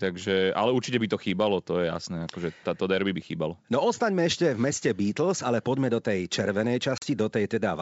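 At about 6.98 s there's packet loss on what sounds like a G.722 call at 64 kbit/s: roughly 40 ms drops out, a couple of packets' worth, leaving a hard-edged silent hole. The ADPCM decoder's predictor loses sync, so the speech comes back around 7.05 s with a bit of roughness before it settles.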